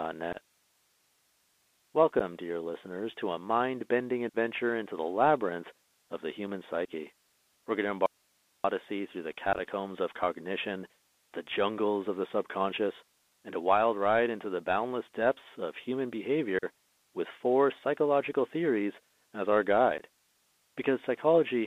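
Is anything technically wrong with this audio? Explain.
Yes. The speech is carried over a Bluetooth CVSD headset codec, it suffers unconcealed Bluetooth headset packet loss at eight points, and it has one longer audio dropout to a faint residue.

Throughout, the CVSD link codes each sample as a single up-or-down bit at a 64 kHz rate with an adapting step, inside a line band of roughly 250 Hz to 3.6 kHz. The damage is plainly audible. The sound is narrow and boxy, with no highs, and a granular hiss sits underneath. Sibilants come out scratchy, and loud high-frequency sounds distort where they outrun the step size.

The unconcealed Bluetooth headset packet loss happens at these points:
0.33 to 0.37 s, 2.19 to 2.21 s, 4.29 to 4.35 s, 6.85 to 6.88 s (just after "labyrinth of the human"), 9.53 to 9.61 s, 16.59 to 16.65 s, 18.33 s (just before "theories as our"), and 19.98 to 20.03 s (just after "theories as our").

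At each point, voice packets of a few milliseconds were lost between headset and phone and nothing filled them. Each gap is a hard-edged hole of about 8 to 45 ms that can click, followed by a brief dip in level. At 9.53 s the losses are scattered over 60 ms, so that stretch sounds crackly and chopped.

From 8.06 to 8.64 s there is an audio dropout to a faint residue. The wanted signal was likely lost while the path after the break stayed live. For about 0.58 s the speech cuts out abruptly, leaving only hiss about 40 dB below the speech level, and then it snaps back.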